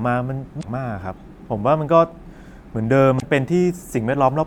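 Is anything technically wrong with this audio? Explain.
Yes: damaged data in a compressed stream, at 0.59 to 0.65 s and 3.18 to 3.23 s. Corrupted bytes in the encoded file throw the decoder out of step, so it misreads those frames while hunting for the next valid header, producing a brief chirp or squawk lasting about 56 ms each time.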